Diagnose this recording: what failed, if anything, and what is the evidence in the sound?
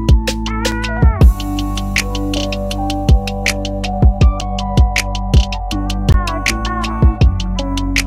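Block of digital silence at 0.71 s, 4.41 s and 6.12 s: the audio drops abruptly to silence. The first two gaps last 5.8 ms, fitting a 256-sample buffer, and the third 17.4 ms. This points to buffer underruns at the driver stage.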